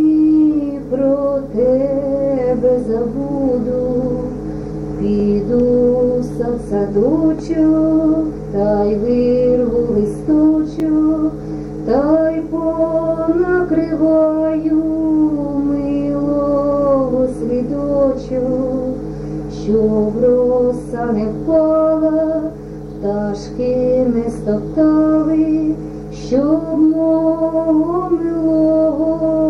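At 5.2 s and again at 10.8 s, fresh audio failed to reach the playback device in time, so it replayed its last block, a repeated buffer. Each slice, which fits a 20 ms buffer, plays one extra time with a hard seam, heard as a brief click-like stutter.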